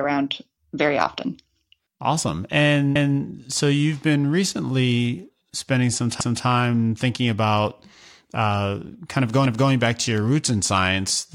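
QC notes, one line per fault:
2.96–3.21 s, 6.21–6.46 s, 9.46–9.71 s: overlapping chunks. Each 3 s chunk begins 250 ms before the previous one ends, so that stretch of speech plays twice, as before "so you've been recently". Unlike dropouts, nothing goes missing; content repeats with a stutter at strictly regular intervals.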